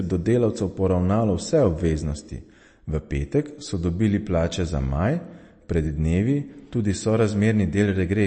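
From start to finish the speech has nothing above 8.3 kHz and a watery, swirling texture, with smeared consonant attacks and chirpy sibilants. This is likely MP3 compression, the encoder cutting treble and dropping weak frequency lines, damage that points to a bitrate around 35 kbps.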